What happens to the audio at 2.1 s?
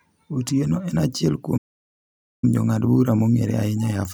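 At 2.1 s the speech is inside a playback stall running from 1.57 to 2.44 s: about 0.85 s of silence, likely from the player running out of data, shown as a flat waveform and blank spectrogram gap.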